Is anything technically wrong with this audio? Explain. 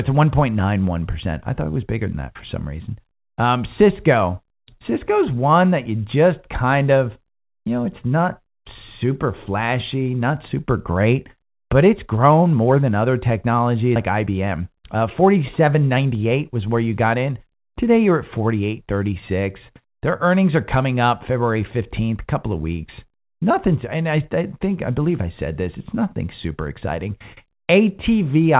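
Yes, there are two faults close together, in a narrowband call-path recording limited to 4 kHz.

At 13.96 to 13.98 s, right after "more than other technology", there is a skip ahead: about 0.4 s of audio never plays, likely dropped in transit or discarded when the jitter buffer overflowed. The two sides are butted together with no fill, so the sound jumps abruptly forward.

From 14.12 to 16.25 s, ending just before "was where you got", a jitter buffer speed-up is audible. The buffer held surplus delay, so the receiver repeatedly cut out pitch-period-length pieces, around a fifth of a second in total. Playback runs about 8% fast at unchanged pitch, sounding slightly hurried.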